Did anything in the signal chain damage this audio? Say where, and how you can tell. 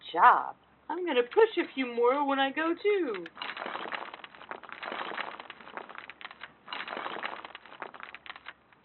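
No, nothing in the signal chain damaged this audio.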